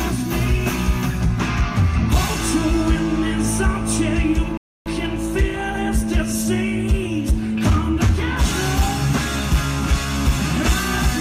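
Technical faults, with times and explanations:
4.57 to 4.86 s, rebuffering stall: the audio drops into silence for 285 ms and then picks up again at exactly the point where it broke off, so no material is skipped and the clip simply runs 285 ms longer. The player had exhausted its downloaded audio and waited for more to arrive. On a waveform this is a flat gap, and on a spectrogram an empty vertical band, with the content on each side joining up seamlessly.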